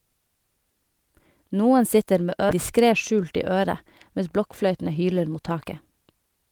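At 2.49 to 2.51 s, just after "sitter med", a skip ahead occurs. About 0.7 s of speech was dropped. Playback jumps straight on with no gap.

From 2.77 to 6.47 s comes a jitter buffer speed-up. The buffer held excess delay, so short pitch-period pieces were cut. Speech runs 108% fast at unchanged pitch, sounding hurried.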